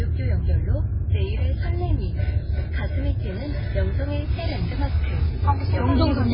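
Throughout, the sound is cut off above 5.3 kHz and carries heavy watery, swirling artefacts, likely from MP3 compression at a very low bitrate, around 16 kbps. Weak frequency components flicker on and off between frames, which a plain low-pass filter wouldn't cause.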